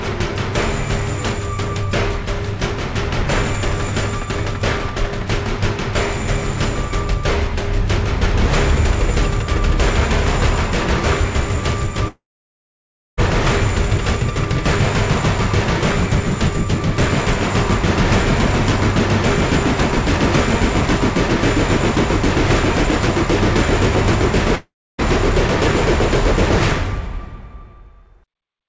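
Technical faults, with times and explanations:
12.08–13.19 s and 24.55–25.00 s, long network dropout: The stream likely stopped delivering packets for about 1.1 s and then 0.44 s, so that audio was never played. The receiver stretched the last sound into a brief fading buzz, then left near-silence for about 0.97 s and 0.29 s before the sound resumed further on with the gap skipped. The filled stretches sit inside the same 8 kHz-limited G.722 band as the rest of the clip.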